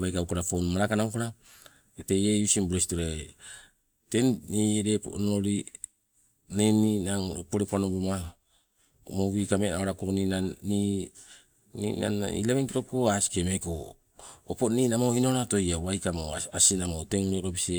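Speech, with nothing technically wrong to point to and no times or causes to give.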